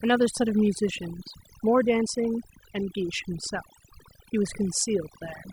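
Overdone noise removal runs through the whole speech clip. A noise reducer set too aggressively cuts any frequency band sitting near its noise estimate. The background drops to near silence dotted with twinkling specks. A spectrogram shows isolated bright dots scattered across a dark floor, with ragged gaps inside the voice's harmonics.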